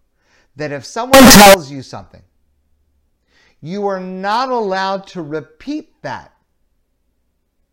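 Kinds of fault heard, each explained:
Float read as integer: from 1.14 to 1.54 s the speech turns blaring and square-edged at a high, almost fixed level, likely 32-bit float samples being read as 32-bit integers.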